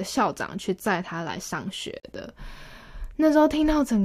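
Separately encoded pieces were joined without trimming the encoder's start delay and end-frame padding, producing a gap at a join of encoded pieces at 2.0 s: about 45 ms of silence cuts into the speech with smeared edges, then the speech resumes where it stopped.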